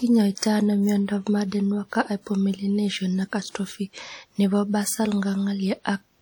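From the start of the speech to its end, the audio carries plainly audible transform-codec damage, likely WMA compression at a rate that points to around 48 kbps. Quantisation noise smeared over long blocks gives the speech a ringing, washy quality and leaves a hiss that swells and fades with the signal. Quiet spectral detail drops out rather than the whole top band, since content still reaches about 20.1 kHz, which separates this from simple low-pass filtering.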